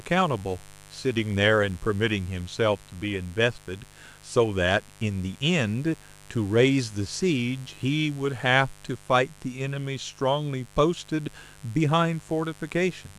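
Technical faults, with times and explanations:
Throughout, mains buzz: 50 Hz switching spikes leak in twice per cycle; their harmonics make a steady, raspy buzz about 25 dB under the speech.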